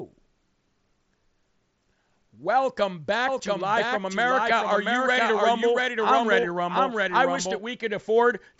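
A doubled audio track runs from 3.28 to 7.58 s: a second full-band copy of equal loudness trails by roughly 0.7 s, dry and starting and stopping abruptly, likely from a slower second capture path. Concealed Bluetooth headset packet loss follows at 3.39 s, a single 7.5 ms gap patched almost invisibly, and again from 6.41 to 6.43 s, where a 22.5 ms gap, consistent with three lost frames, comes through as a brief held buzz with a slight warble on recovery.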